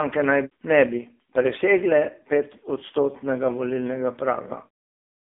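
AMR narrowband mobile codec damage runs through the whole of this speech recording. The sound sits in a telephone band of roughly 250 Hz to 3.6 kHz, with nothing above 3.6 kHz. The codec rebuilds the voice from a vocal-tract model excited by a few pulses per short subframe. At a low bitrate those pulses are coarse, leaving a heavily buzzy, synthetic timbre, which fits one of AMR-NB's lower modes, around 6.7 kbps.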